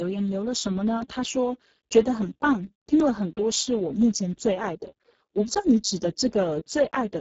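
Speech coded throughout with the Speex codec at a very low setting, consistent with a bitrate around 6 kbps. Heavy damage leaves the voice noisy and hoarse. A spectrogram shows smeared, noise-like texture instead of clean harmonics and nothing above 7.7 kHz.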